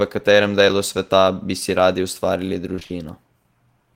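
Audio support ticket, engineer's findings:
Repeated packet loss (robotic sound), 2.75–2.91 s, right after "bi si radi ustvarili". Network/jitter buffer: packets lost or late in quick succession, roughly four holes, longest 22 ms, each patched by extending the preceding audio. About half the stretch is concealment, giving choppy speech with pieces missing.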